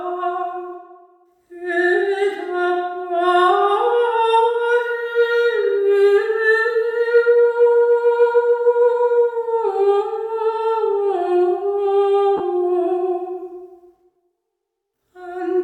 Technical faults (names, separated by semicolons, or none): lost LE Audio frames